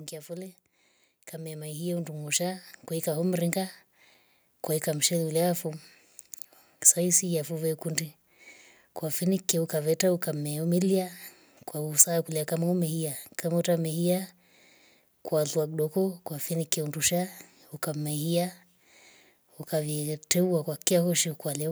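From 0.26 to 5.93 s, automatic gain rising: the control judged the input too quiet and lifted it by about 11 dB. Speech and background swell together.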